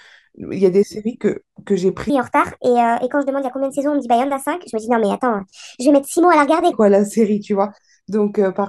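From 2.10 s to 6.72 s the speech runs as a section at the wrong speed, about 1.39 times too fast, which raises pitch by roughly five semitones and makes the speaker sound high and hurried. Speed and pitch jump together at both boundaries, likely from playback against a mismatched clock.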